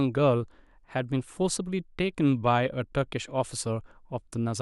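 Nothing here needs pointing out: the speech runs along without a single technical fault to flag.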